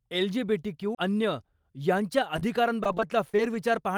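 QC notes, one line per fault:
0.95–0.97 s, CD skip: a brief mute of about 30 ms and a tick before "अन्य यांच्या", then the sound resumes elsewhere, visible as a thin waveform notch.
2.36–3.55 s, repeated packet loss (robotic sound): ten short holes, longest 31 ms, about 150 ms patched by continuing prior sound after "अन्य यांच्या", making it choppy, with smeared, repeated spectrogram frames.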